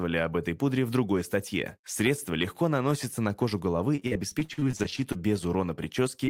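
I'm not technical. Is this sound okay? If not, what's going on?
No. From 3.95 to 5.18 s, right after "наносится на кожу головы", there is repeated packet loss, which gives a robotic sound. Pieces of the call kept arriving too late or not at all, more than a dozen times, with the longest hole about 50 ms. Each time, the receiver patched the gap by stretching the last bit of sound. About a quarter of that stretch is patched rather than real, so it sounds choppy.

At the very end, from 6.26 to 6.29 s, there is a short concealed packet loss. About 20 ms of audio never arrived, and the receiver covered the gap by extending the sound just before it and then blending back in. It passes as a tiny smear or wobble, and a brief sound there may be swallowed.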